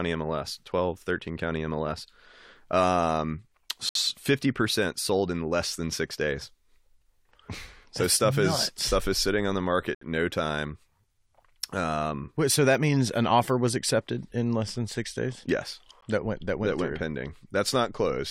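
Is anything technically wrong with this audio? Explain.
Yes. The speech has a gap between stream segments at three points: 3.89 to 3.95 s, 9.95 to 10.01 s, and 16.01 s. The time stamps of consecutive 6-second segments don't quite meet, so the player pads the mismatch with silence. The result is a hard-edged hole in the speech of about 61 ms, then 67 ms, then a brief 15 ms dropout, recurring roughly every six seconds. Nothing is missing; the silence is inserted time.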